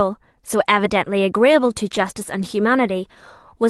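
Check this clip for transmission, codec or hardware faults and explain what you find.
There are two brief spots of lost packet rebuilt from error correction, at 0.73 to 0.79 s and 1.95 to 2.09 s. The gaps fit two and then four dropped packets. The decoder played the low-bitrate backup copies from the next packets, covering about 40 ms and 80 ms, so there's no silence, just rougher, noisier patches.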